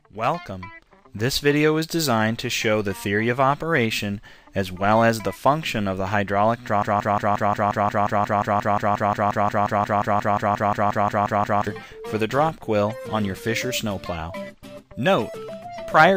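From 6.83 s to 11.67 s the audio stutters on a single 177 ms fragment, repeating it exactly and back to back 27 times, a broken-record loop. This likely comes from the player, encoder or stream stalling and re-sending its last buffer, so the intended audio from that stretch is missing.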